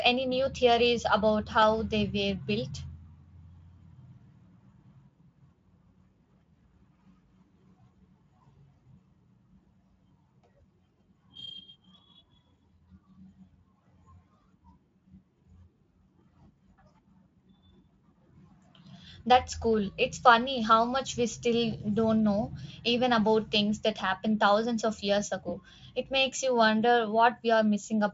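At 1.62 s, just after "any new theories about", a block of digital silence about 1.4 ms long drops in. The sound cuts out abruptly, likely from a late buffer, leaving a single tick before "they were built".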